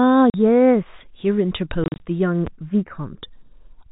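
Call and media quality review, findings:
Channels drifting apart: slow flanging throughout, from stereo channels on separate clocks (around 150 ppm apart). The inter-channel delay grows to a fraction of a millisecond by the end. Spectrogram: comb notches sweeping slowly downward in a mono sum.

Packet loss filled with silence: hard-edged dropouts chopping the speech. One 40 ms hole at 0.30 to 0.34 s, which fits two 20 ms packets. About 100 ms missing between 1.84 and 2.00 s in scattered runs of up to 40 ms. Waveform: flat silent segments with hard edges.

Loud pop: a single sharp pop at 2.47 to 2.50 s, about 5 dB above the speech, which carries on underneath. Likely a plug, switch or driver transient. Waveform: narrow spike. Spectrogram: vertical broadband stripe. The G.711 mu-law coding limits the band to 4 kHz.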